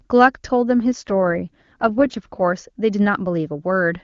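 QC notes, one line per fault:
0.93–2.41 s, AMR rate drop: speech turns rough and synthetic without losing bandwidth or dropping out, which fits the link falling back from 23.85 to 8.85 kbit/s.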